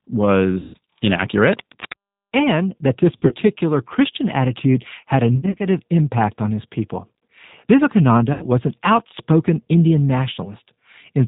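The whole clip runs through the G.729 codec at 8 kbit/s, so the speech sounds band-limited below 4 kHz, noticeably rough and a bit synthetic throughout. From 0.60 to 0.76 s there's VoIP packet loss concealed by the speech codec. About 140 ms of audio went missing, and the decoder papered over it by stretching the last sound and fading it out. Between 1.47 and 1.94 s, cable scratch noise rustles over the speech at only about 10 dB under it, likely from a worn connector or lead being moved. Concealed packet loss returns at 3.17 to 3.35 s, with gaps scattered rather than one long hole. Again at 5.36 to 5.67 s it's spread out in short dropouts, each patched by stretching the last sound. The last one, at 8.33 to 8.48 s, is a single 80 ms hole, and the voice stays weak or distorted for a moment after it before recovering.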